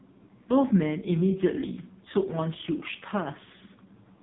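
AMR narrowband mobile codec, throughout: speech squeezed through a vocal-tract model with nothing above 3.8 kHz, sounding buzzy and synthetic, which points to a low mode around 5 kbps.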